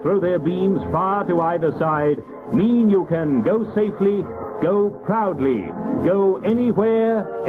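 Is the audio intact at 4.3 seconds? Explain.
No. Gain pumping runs through the whole clip, including 4.3 seconds. The level likely swings by around 15 dB because a fast limiter keeps pulling down an overdriven input. Loud and soft parts end up closer in level, squashing the dynamics.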